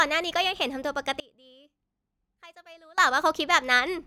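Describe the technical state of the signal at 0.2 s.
At 0.2 s the speech signal is intact, with no audible fault at that moment.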